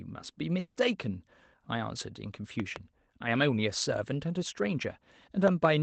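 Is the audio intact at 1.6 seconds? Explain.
Yes, the speech at 1.6 seconds is intact, with no fault at that moment beyond the ordinary coding of the call path it passed through.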